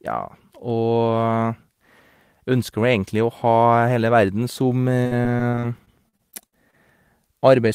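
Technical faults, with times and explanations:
5.03–6.75 s, repeated packet loss (robotic sound): the speech turns choppy, with a stuttering quality and small pieces missing. About a dozen brief dropouts, none longer than about 60 ms, hit in quick succession. Each hole is bridged by stretching the preceding sound, about 0.37 s in total, or roughly a fifth of the stretch. About 0.38 s more is simply lost. That repeated patching gives the robotic texture.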